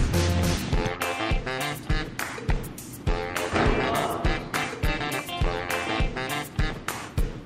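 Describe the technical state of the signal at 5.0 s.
At 5.00 s there is an overlap between stream segments, at a boundary that fits 2-second segments. The overlapping stretch is trimmed away. Several milliseconds vanish, and the waveform jumps.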